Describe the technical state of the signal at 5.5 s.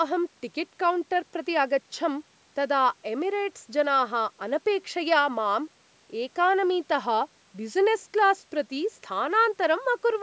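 At 5.5 s the speech is intact, with only the expected band limit of call microphone processing, which leaves nothing above 8 kHz and trims the lowest bass.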